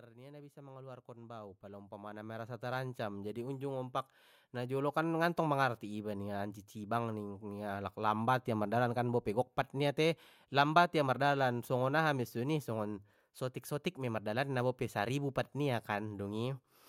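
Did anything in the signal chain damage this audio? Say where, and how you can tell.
Yes. The damage sits in the call processing stage, where automatic gain rising is audible from 0.08 s to 5.23 s. Over those five seconds the level climbs steadily by about 19 dB. The speech and the background noise swell together, so the change isn't in the talker. The control judged the input too quiet and kept raising its gain. The rise settles just before "mangarti ningia ancicibang ning".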